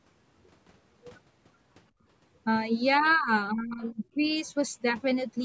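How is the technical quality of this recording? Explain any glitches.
The recording has echo-canceller problems from about 1.9 s onward, where the talker's level drops and a faint second voice appears, all within the 8 kHz bandwidth of the call's microphone path.

Background gated by the echo canceller, 1.90 to 2.04 s: while the loudspeaker was active, the canceller clamped the microphone hard, by about 21 dB. The room sound briefly drops away into near-silence, then returns as the suppression releases.

Speech suppressed in double talk, 3.00 to 3.31 s and 3.51 to 4.31 s: the talker's voice sags, by around 15 dB in the first stretch and about 20 dB in the longer second one. This is likely the canceller mistaking overlapping speech for echo and turning everything down.

Other side's voice leaking through, 3.04 to 3.11 s: a brief, faint scrap of a second voice, far below the talker, slips in during the first dip. 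This is likely loudspeaker echo that the canceller failed to remove from the microphone.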